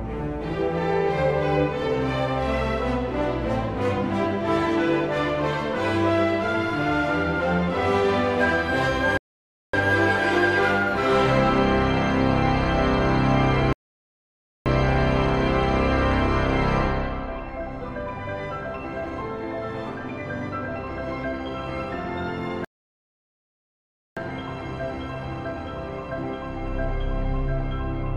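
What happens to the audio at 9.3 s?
At 9.17 s playback hits a rebuffering stall: the player runs dry, goes silent until 9.74 s, then picks up exactly where it stopped, adding 0.56 s.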